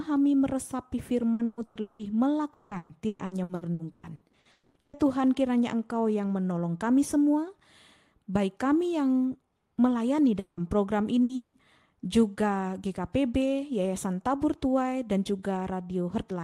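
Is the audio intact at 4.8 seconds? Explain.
No. At 4.8 seconds you're inside a stretch of repeated packet loss (robotic sound) running from about 2.53 to 4.96 s. Packets keep going missing, twelve gaps in all, the longest 180 ms, and each hole gets patched by stretching out whatever sound came just before. Roughly 44% of that span is fill rather than real audio, so it comes across choppy, with bits chewed out.

Right before that moment, from about 4.51 to 4.78 s, there's a longer hole. The sound smears into a fading buzz for around 240 ms, then drops to near silence briefly before audio picks up again with a chunk missing. That's most likely a long network dropout, where nothing arrived for a while and the receiver just carried the last sound forward until it ran out.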